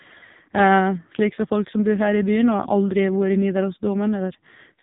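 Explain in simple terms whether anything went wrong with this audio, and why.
The speech was passed through the AMR narrowband mobile codec, the compression used for older mobile phone calls, at a very low data setting. For the whole clip, everything above 3.8 kHz is gone, so the voice sounds muffled and boxy, like a phone line. The codec rebuilds the voice from a simple model of the throat and mouth, and with so little data, the result sounds heavily buzzy and synthetic.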